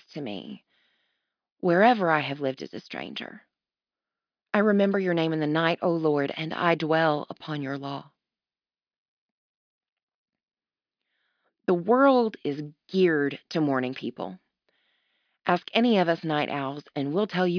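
No technical faults are audible.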